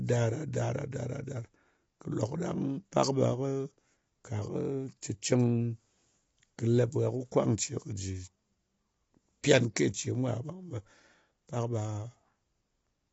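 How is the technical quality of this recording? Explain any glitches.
The recording is degraded throughout by low-delay AAC compression, which is plainly audible across the whole clip. The speech sounds rough and grainy, with a noisy texture filling the gaps between harmonics, and nothing is present above about 7.7 kHz. The likely cause is an AAC-ELD encoder at a bitrate around 24 kbps. Its short frames cannot resolve pitch harmonics finely, so at this rate the coder smears noise into the spectrum and discards the top band.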